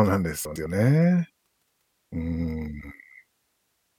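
Speech clip with frames out of order from 0.45 to 0.66 s: two adjacent blocks of about 105 ms each, which fits runs of four frames, play swapped, giving a garbled flutter. Unlike a dropout or repeat, nothing is lost or duplicated.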